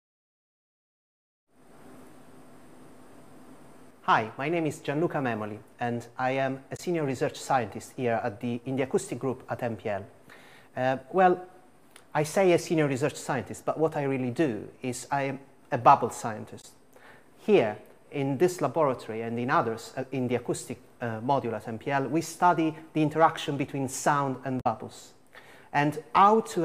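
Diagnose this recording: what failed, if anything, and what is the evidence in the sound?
Three brief disruptions cut through the sound at 6.75–6.80 s, 16.60–16.65 s and 24.60–24.66 s, each lasting roughly 40 to 70 ms. This is damaged data in a compressed stream. At the codec stage, corrupted bytes made the decoder misread frames and lose sync until it found a valid frame header.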